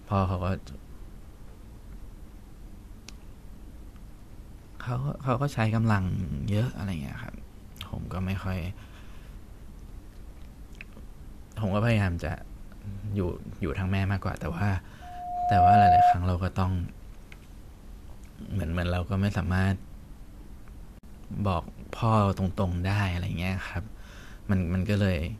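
A loudspeaker feedback squeal runs from 15.01 to 16.16 s. The microphone is picking up the loudspeaker it feeds, and at 716 Hz the loop gain passes one, so a pure tone swells over roughly 0.7 s to about 15 dB above the speech.

A gap at a join of encoded pieces follows at 20.99 to 21.03 s. It is a 47 ms gap with edges smeared by the codec, left where separately encoded pieces were joined with their start delay and end padding still in place. The speech then resumes where it stopped.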